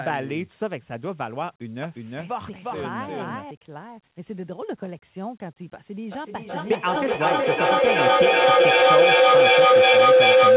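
Speech heard through a call codec that leaves nothing above 4 kHz has two faults. A doubled audio track from 1.83 to 3.51 s adds a second, equally loud copy about 400 ms behind, likely from a slower capture path or a misaligned edit. A feedback howl from 6.12 s to the end builds near 500 Hz, pulsing roughly every 400 ms and reaching about 13 dB above the speech, as the loudspeaker-to-microphone loop gains level on each trip.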